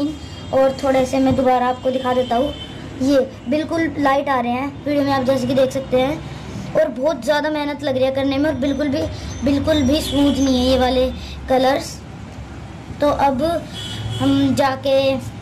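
No faults are audible anywhere in the clip.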